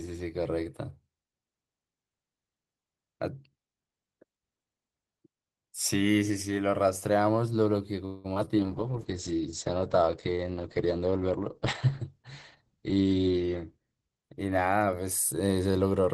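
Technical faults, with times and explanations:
8.05–8.26 s, call audio freeze: For about 190 ms the speech stalls. The last sound is stretched into a fading buzz or hiss, then the talker picks up exactly where they left off, so nothing is lost but everything after lands about 190 ms later. That's most likely a burst of delayed packets that drained the jitter buffer, with the receiver covering the wait by extending what it last had.
8.34 s and 8.45–8.61 s, short concealed packet loss: Two quick blips. Each time about 20 ms of audio never made it to the decoder in time, and the receiver papered over the hole by extending the preceding sound and then blending back into the real signal. You hear a brief smear or wobble, and a short consonant can get swallowed. The second blip also stretches things by roughly 20 ms.
8.58–15.21 s, call bitrate drop: During the second of those glitches, the encoder's budget falls from 32 kbps to about 9 kbps, and it stays at the bottom for about 5 s. 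Opus has to code much more coarsely at that rate, so the speech turns rough and a bit watery. The top end also gets chopped to around 8 kHz, which is why it goes duller until the rate climbs back.
12.12–13.80 s, jitter buffer speed-up: Here the buffer had more audio queued than it wanted, so the receiver clipped out tiny chunks of one or a few pitch periods, over and over. Altogether that trims roughly 200 ms. The speech runs at about 111% speed with the pitch unchanged, so it sounds hurried through that stretch.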